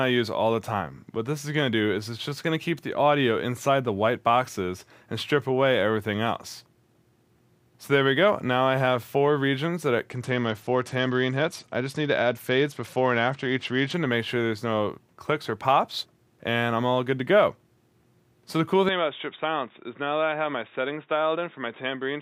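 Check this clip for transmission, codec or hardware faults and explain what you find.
Two faults turn up, one around the middle of the clip and one at the end.

From 10.10 to 13.94 s the treble goes dull and a gritty, grainy noise rides on the sound, then clears. This is a Bluetooth SBC bit pool drop. A congested link forced the encoder to spend fewer bits, starving the upper sub-bands and coarsely quantising the rest, which fits a fall to around 90 kbps.

From 18.89 s to the end the sound turns abruptly boxy, with nothing above 3.8 kHz. It is a few dB quieter, with a faint new background noise well beneath it and no gap at the change. The likely cause is the input switching to a poorer device, such as a narrower-band microphone or headset call profile.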